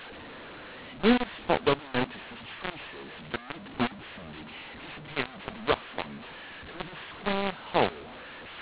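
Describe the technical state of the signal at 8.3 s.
At 8.3 s the speech carries the mu-law and A-law mixed up fault, as it does for the whole clip. The telephone audio was coded with A-law but decoded as mu-law. The two logarithmic scales disagree, so sample levels come out wrong. Some are too loud and others too soft. The quietest samples are lifted well above silence. The voice sounds harsh and distorted, and gaps fill with noise. The 8 kHz G.711 coding passes nothing above 4 kHz.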